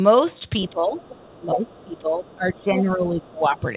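At 0.65 to 0.7 s a faint second voice sits about 30 dB under the speech, and from 0.97 to 1.43 s it returns louder, about 25 dB down. Later scraps at 1.7 to 1.81 s, 2.21 to 2.35 s and 3.22 to 3.28 s are quieter still, around 30 to 35 dB down. This is most likely the other side's voice leaking through: loudspeaker echo that the echo canceller left in the microphone signal.

Overlapping these leaks, the main speech dips from 0.7 to 0.99 s by up to about 10 dB. From 1.39 to 3.63 s it dips again, by up to about 15 dB, across roughly two seconds. This is likely speech suppressed in double talk, where the canceller turned down both the echo and the near talker. Throughout, the band stops at 4 kHz, which fits a narrowband G.711 call path.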